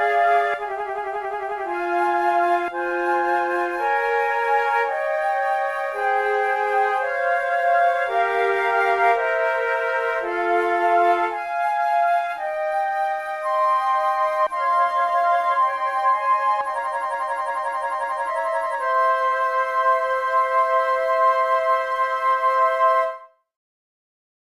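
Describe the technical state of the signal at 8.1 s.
At 8.1 s the signal is intact, with no dropout, distortion, glitch or other fault audible at that moment.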